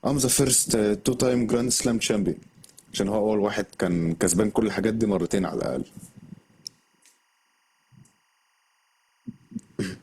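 Speech runs through the whole recording with a timecode bleed underneath it. The faint, steady chirping warble alternates between tones near 1 kHz and 2 kHz, the two pitches of linear timecode's square-wave signal, and its rhythm matches a 24 frames-per-second code. It sits low, roughly 45 dB below the speech, and is consistent with timecode leaking in from an adjacent track or cable. The clip also shows the signs of an adaptive stream starting at a low bitrate. From 0.0 to 6.0 s the treble is thin and partly synthetic and codec artefacts are stronger, which fits an Opus stream of around 16 kbit/s. At 6.0 s the quality improves abruptly with no gap, consistent with the player switching to a version of around 64 kbit/s once it had measured the connection.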